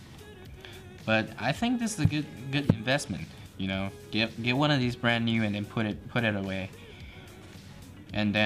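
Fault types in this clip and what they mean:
No technical faults can be heard anywhere in the signal, which holds steady and continuous with no interruptions or level disturbances.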